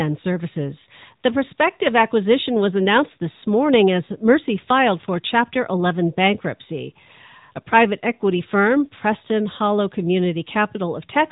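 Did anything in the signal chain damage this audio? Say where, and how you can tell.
Yes, at the codec stage: this speech has gone through the AMR narrowband mobile codec for its whole length. Nothing above about 3.8 kHz survives, and the voice has that buzzy, synthetic edge of a pulse-driven vocal-tract model, which fits a mid-rate mode around 10.2 kbps.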